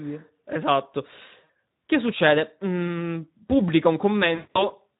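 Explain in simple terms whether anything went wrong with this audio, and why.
Something did go wrong. The whole recording passed through the Speex codec at a low setting, so the speech sounds hoarse and noisy throughout.

There is also VoIP packet loss concealed by the speech codec. Near 1.43 to 1.50 s and again from 4.35 to 4.76 s, pieces of the signal went missing. The decoder filled the gaps by stretching what came before, so the voice is drawn out and fades.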